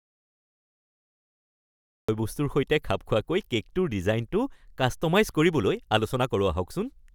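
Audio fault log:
0.00–2.09 s, audio dropout to silence: already under way at the start, dead silence with no room tone until speech resumes at "সৈতে খাপ খোৱাকৈ"; likely a lost input written as silence.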